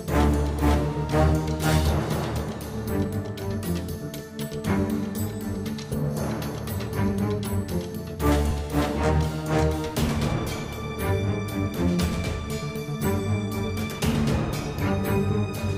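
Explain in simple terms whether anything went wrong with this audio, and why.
Two small glitches, at about 8.51 s and again at 10.28 s. Each one is a quick skip where the sound jumps forward a touch, with no gap of silence, just a tiny chunk of roughly 5 ms missing. That's most likely a dropped buffer (overrun): the recording software didn't pick up a batch of samples in time, the hardware wrote over them, and the audio on either side got stitched straight together.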